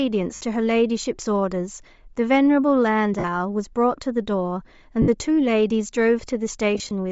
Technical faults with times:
0.00-7.11 Bluetooth LC3 compression
0.35-0.41 lost LE Audio frames
3.19-3.25 lost LE Audio frames
5.02-5.08 lost LE Audio frames
6.75-6.91 lost LE Audio frames

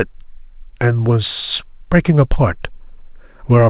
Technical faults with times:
none

